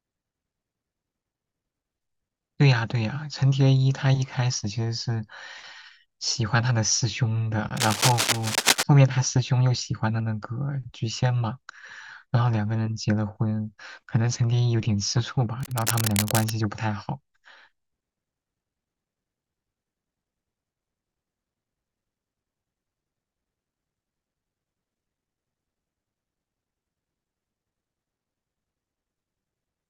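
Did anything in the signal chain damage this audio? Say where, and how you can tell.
Yes, in the analogue wiring. Cable scratch noise appears from 7.76 to 8.83 s, roughly level with the speech, and from 15.60 to 16.54 s, somewhat quieter. Both are dense, uneven scratching bursts, likely from a worn cable or connector shifting and rapidly changing its contact resistance.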